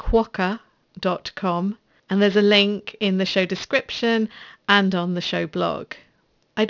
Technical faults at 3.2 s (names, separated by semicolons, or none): aliasing